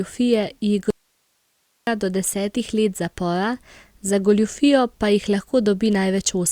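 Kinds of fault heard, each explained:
Audio dropout to a faint residue: from 0.90 to 1.87 s, the speech cuts out abruptly for about 0.97 s and returns mid-flow just before "do desetih". The gap is not silent. It holds a thin hiss at roughly 45 dB below the speech, so the path after the break stayed live while the wanted signal was lost, likely through a brief failure upstream of the input. The sudden edges set it apart from a natural pause or fade.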